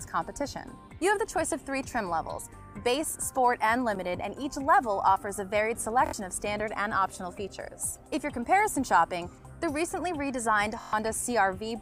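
Bluetooth stutter occurs at 6.06 s and again at 10.81 s. Packets arrived late or not at all, so the receiver kept repeating its last short buffer. The result is a stuttering repeat lasting about 70 ms, then 116 ms, before the sound resumes further along.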